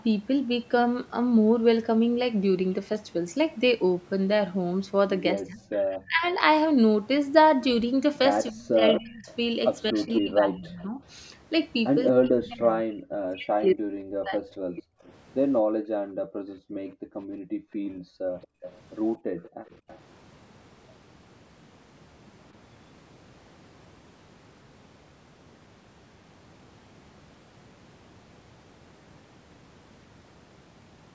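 Speech suppressed in double talk first appears from 5.46 to 6.23 s. The voice sinks by as much as roughly 25 dB over most of that stretch. The likely cause is an echo canceller that heard both ends talking together and, unable to tell its own talker from loudspeaker echo, pulled everything down. It returns harder from 8.5 to 11.0 s, dipping by up to about 30 dB over roughly a second and a half.

Echo leak overlaps that second dip, from 8.93 to 10.83 s. A copy of the voice trails the original by 231 ms at only about 5 dB below it. The likely cause is a loudspeaker whose echo canceller failed to remove what its microphone picked up, sending it back down the line.

Speech suppressed in double talk is deepest from 12.12 to 14.84 s. The voice drops by as much as about 40 dB across roughly two seconds of the passage.

Echo leak returns briefly from 15.04 to 15.09 s, a faint scrap about 30 dB down, still 231 ms behind the voice.

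Background gated by the echo canceller runs from 15.62 to 19.7 s. The room sound falls away by up to about 40 dB in stretches totalling around three seconds, then comes back. While the loudspeaker played, the canceller clamped the microphone hard, taking the ambience with it.

Echo leak recurs within and just after that gating, from 18.42 to 18.81 s at about 20 dB down and from 19.72 to 19.99 s at about 25 dB down. Both are delayed repeats at the same 231 ms lag. Throughout, the call's microphone processing leaves nothing above 8 kHz.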